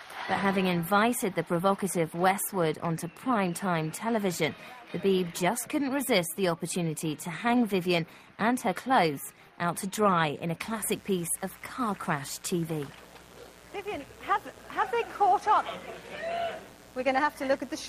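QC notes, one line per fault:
10.63–17.89 s, mains buzz: a steady, raspy 60 Hz buzz enters at 10.63 s and runs to the end of the clip, sitting roughly 25 dB below the main sound. Interference from a dimmer, a rectifier or a missing shield couples sharp switching spikes into the signal twice per mains cycle, so the buzz carries a dense series of harmonics of 60 Hz extending up to several kHz rather than a pure low hum.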